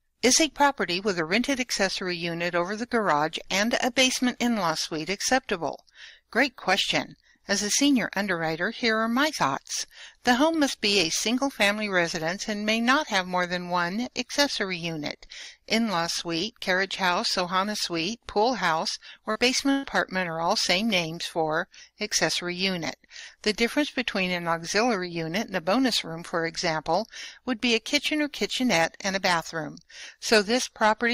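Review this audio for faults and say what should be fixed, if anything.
At 19.31 to 19.38 s there is a short concealed packet loss: about 40 ms of audio never arrived in time, and the receiver bridged the hole with 37 ms synthesised from the preceding sound before blending back into the real signal. It comes across as a brief smear or wobble. On a spectrogram the harmonics or noise texture run suspiciously uniform for that sliver, and the waveform shows a repeated, too-regular cycle pattern with a soft crossfade at each edge. A larger jitter buffer and forward error correction would let late or lost packets be recovered instead of guessed.

At 19.71 to 19.86 s a burst of packet loss takes out about 120 ms in a row. The receiver extended the last sound across the entire gap, fading it as it went, so a held buzz or thinning hiss stands in for the missing material, and the audio then picks up further along with that stretch gone. 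With no silent stretch, the waveform envelope decays smoothly rather than dropping out, and the spectrogram shows frozen, flat harmonics or smeared noise fading in level before an abrupt change where real audio returns. Redundant encoding or FEC spanning several packets, plus fixing the congested or lossy network link, would prevent such bursts.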